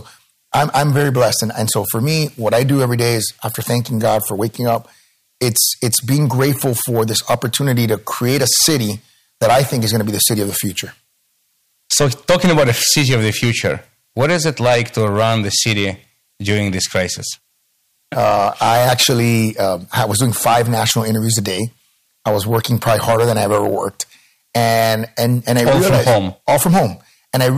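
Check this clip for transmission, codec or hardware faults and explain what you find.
There is one fault: hard clipping, present throughout the speech. The signal is driven about 14 dB past what one stage can pass, so every peak is sliced flat, and a few percent of samples sit pinned at the ceiling. Those flat tops add high harmonics, heard as a harsh fuzz on each loud syllable rather than occasional crackle. Unlike soft saturation, which rounds peaks into warm thickening, this edge is abrupt and gritty, and it comes and goes with level.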